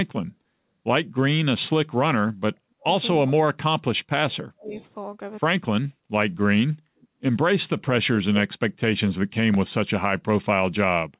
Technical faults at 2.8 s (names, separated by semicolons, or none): speech suppressed in double talk